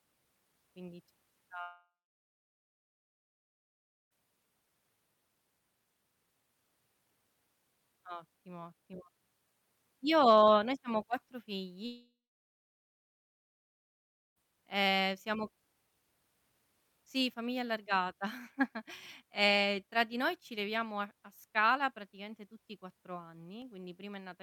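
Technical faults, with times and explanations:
1.61–4.17 s, long network dropout: likely a loss of incoming audio. The last sound continues as a brief fading buzz, then about 2.2 s of silence before audio resumes with the lost part gone.
11.86–14.38 s, long network dropout: likely another stall in arriving audio. The concealment fills roughly 2.5 s with a short fading buzz, then about 2.2 s of silence, and resumes past the lost part.
23.62 s, block of digital silence: the output briefly received zeros instead of audio, a 0.73 ms hole that fits a 32-sample block. The abrupt edges produce a single tick.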